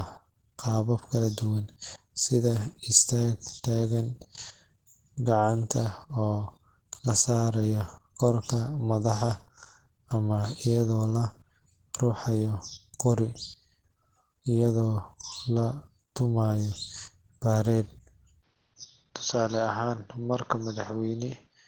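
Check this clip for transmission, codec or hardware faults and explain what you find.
Two faults: one runs through the whole clip, the other affects its final seconds.

Low-bitrate audio saved at a high bitrate: the speech was likely coded at a very low rate, around 16 kbit/s by the sound, then re-saved as high-rate MP3, which keeps the original artefacts.

Input switched to a poorer device: from 18.43 s to the end, recording likely moved to a narrower-band input. Sound dulls with nothing above 6.4 kHz, drops about 5 dB, and gains faint noise, with no gap.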